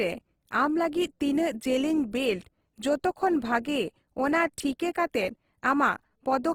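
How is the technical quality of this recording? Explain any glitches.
The technical quality is compromised by audible coding damage that runs through the whole recording. Throughout, the speech sounds rough and grainy, the likely cause being Opus compression in its music (CELT) mode at a rate that fits about 16 kbps. Short of bits, the encoder keeps each band's energy but fills detail with folded or noise content. A spectrogram shows smeared, noisy upper bands extending to about 20.2 kHz rather than clean gaps.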